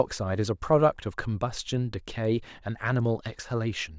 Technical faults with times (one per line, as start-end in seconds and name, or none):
1.00-3.98 resampler restarted on every block